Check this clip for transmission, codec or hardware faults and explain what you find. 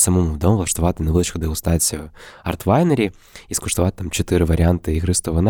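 I found no faults in this clip.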